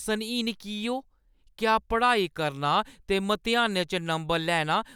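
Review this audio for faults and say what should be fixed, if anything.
Nothing here needs fixing; I listened through the whole thing and didn't catch a single fault.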